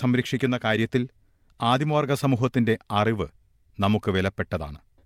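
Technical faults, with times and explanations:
No technical faults detected anywhere in the speech recording.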